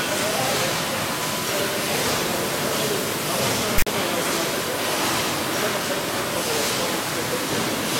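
At 3.78 to 3.87 s, file tags played as audio: text metadata decoded as samples gives a harsh, off-centre rasp with hard edges, then silence from zero padding.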